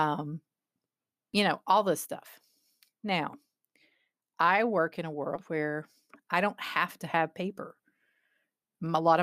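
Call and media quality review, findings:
Compressed frames skipped at 5.35–5.39 s in speech: audio jumps ahead about 150 ms, consistent with several 20 ms decoder frames missing or rejected.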